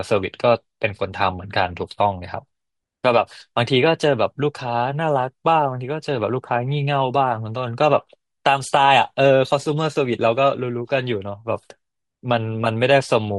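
Across the whole speech clip, from start to finish, the upper frequencies sound grainy and breathy, with a hissy, noise-like texture where fine detail should be. This is likely Bluetooth LC3 compression. The encoder discards much of the high-band content in each 10 ms frame and fills the gap with shaped noise, so consonants and bright tones take on a rough, synthetic edge. The damage is plainly audible, which fits a bitrate around 48 kbps.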